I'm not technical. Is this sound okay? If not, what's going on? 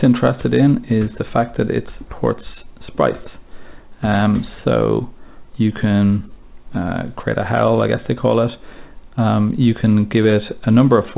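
Yes, nothing is wrong with this sound. It went through an ordinary phone-style call connection, which keeps nothing above about 4 kHz, so it has the slightly narrow, muffled quality of a normal phone call.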